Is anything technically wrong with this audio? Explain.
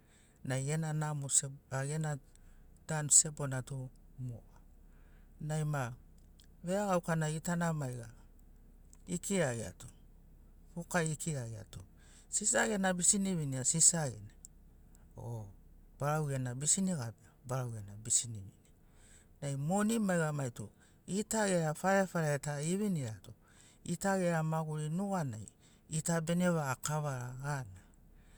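No, nothing in this speech recording points to a technical fault.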